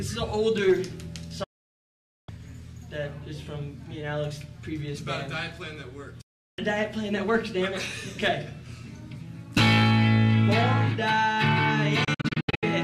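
The receiver lost clean frames and muted three times, a digital broadcast dropout. At 1.43 to 2.29 s and 6.21 to 6.59 s the sound fades out in 8 ms to silence. From 12.04 to 12.63 s it breaks into short holes, the longest 72 ms, and the missing audio never returns.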